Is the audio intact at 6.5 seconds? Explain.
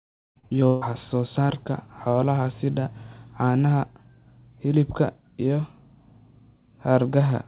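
Yes, the speech at 6.5 seconds is intact, with no dropout, glitch or other fault at that point, only the narrow telephone-band sound of the call path, which carries nothing above 4 kHz.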